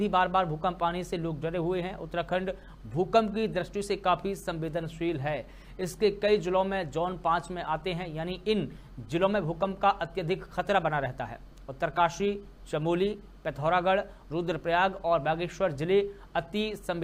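At 3.81 s the sound jumps forward, most likely a dropped buffer (overrun): the recording software fell behind, the hardware overwrote a block of samples before it was collected, and the audio on either side was spliced straight together. Only about 5 ms goes missing, so the skip is short. A waveform shows a sudden step discontinuity with no gap, and a spectrogram shows a thin vertical broadband line at that instant.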